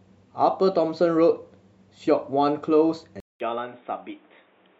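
At 3.20 s the speech drops out for 200 ms, then returns dull and boxy to the end, with nothing above 3.8 kHz, roughly 5 dB quieter and with new background noise about 35 dB down. The likely cause is the input switching to a poorer device.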